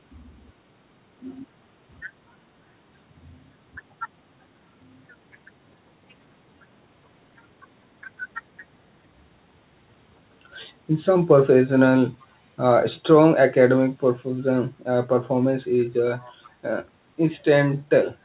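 From 16.19 to 16.5 s a faint echo leak appears: a delayed copy of the speech, about 474 ms behind the original and very quiet beneath it, likely returning because a loudspeaker on the far end was picked up by its microphone and the echo canceller let a scrap through. On a spectrogram it shows as a weak repeat of the preceding harmonic pattern, confined below 4 kHz like the rest of this band-limited call audio. In the waveform it is a low trace trailing the louder speech.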